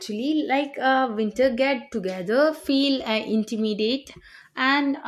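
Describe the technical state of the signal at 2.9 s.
At 2.9 s the speech signal is intact, with no dropout, distortion, glitch or other fault present at that moment.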